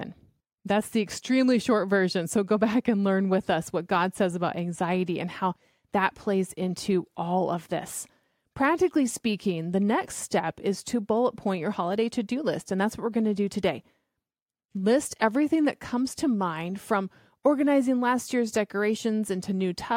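A speech recording with nothing technically wrong that can be heard.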